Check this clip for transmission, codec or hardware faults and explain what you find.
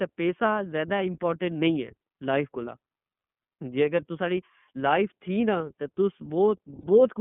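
The speech has two faults: iLBC codec coloration across the whole clip, and two short dropouts from lost iLBC frames.

iLBC codec, throughout: The audio is confined to a telephone band of roughly 150 Hz to 3.4 kHz, and the codec damage is plainly audible. Each frame's excitation is coded on its own rather than predicted from the last, which leaves a slightly rough, synthetic edge on voiced sounds. The sound fits iLBC's 30 ms, 13.33 kbps mode. Generic narrowband filtering would dull the speech without this grainy, synthetic texture, so the texture points to the codec.

Lost iLBC frames, at 3.11 s and 6.81 s: Each gap is a single 30 ms frame. The first falls right after "لائف کولاں" and just before "جے اگر تساں نی". To fill the missing frame, the decoder repeats the last pitch cycle blended with noise, which produces a brief held, faintly buzzy vowel instead of silence. Because iLBC frames are independent, the voice recovers almost at once. 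That quick recovery sets it apart from codecs whose predictive state carries the error into the following frames, and the filled-in vowel sets it apart from a plain dropout to silence.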